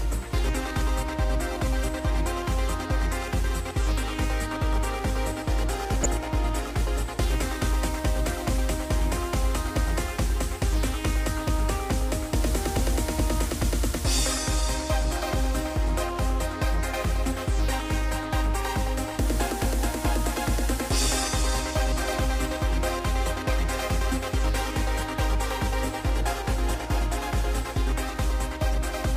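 The sound has a brief burst of DAB burbling from 6.03 to 6.06 s. A few frames break into noisy blips. Bit errors from weak reception slipped past error correction. Wrong samples put short blips of noise in single sub-bands, at a bit error rate of roughly 0.2%.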